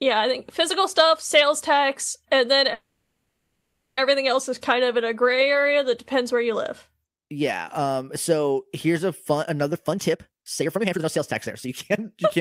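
Packets were likely delayed long enough to empty the jitter buffer, producing a call audio freeze from 2.73 to 3.99 s: a fading buzz or hiss, then about 540 ms of silence. From 9.72 to 12.26 s, jitter buffer speed-up trims pitch-period slices, about a second in all, to cut the built-up delay, so the speech runs at 145 percent speed at unchanged pitch and sounds hurried.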